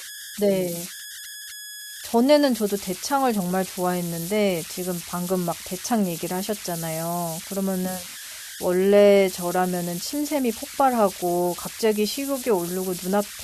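Speech, with converter idle tones running through the whole clip. A tone sits around 1.5 kHz, heard in the pauses. Quieter passages carry a grainy noise, about 13 dB below the signal. An undithered delta-sigma converter caused this. Its small input settled into repeating bit patterns.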